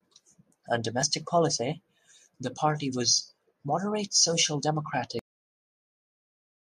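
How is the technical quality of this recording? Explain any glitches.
Two glitches stand out in this speech recording: a brief skip early on and an abrupt ending.

At about 1.02 s, just before "policy the party was", there is an overlap between stream segments. Two consecutive chunks of the stream, which fit roughly 2 s segments, carried time stamps that claimed about 15 ms of shared audio. The player trimmed that stretch even though it was never duplicated, so real sound vanished. It is heard as a small click or hiccup. On a waveform the trace jumps discontinuously, and a spectrogram shows a thin vertical broadband line.

At 5.19 s the recording has a cut-off end. The final buffers were never written out, so the speech stops mid-sound and drops straight to digital silence for the remaining stretch, with no natural decay. On a waveform the signal ends in a vertical edge followed by a flat line. 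A spectrogram shows energy ending in a hard vertical wall, then silence.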